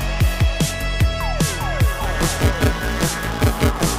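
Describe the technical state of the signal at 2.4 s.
At 2.4 s the signal has buffer tearing, from 2.03 s to the end. Writer and reader have slipped, so most of each buffer replays audio about 20 ms old. The hard joins make a 172 Hz robotic buzz, which fits a 256-sample buffer.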